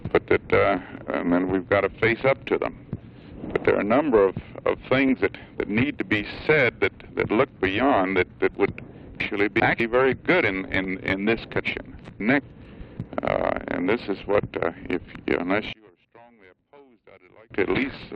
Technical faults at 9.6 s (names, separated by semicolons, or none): chunks out of order